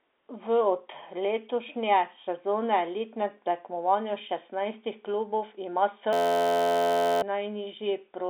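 At 6.13 s a system hang loop takes over until 7.22 s. An 11.61 ms slice, which fits a 512-sample buffer, repeats as a steady buzz at 86.1 Hz, and roughly a second of audio is lost. The waveform shows identical repeating cycles. The spectrogram shows flat harmonic lines spaced 86 Hz apart, under the telephone band's 3.7 kHz ceiling.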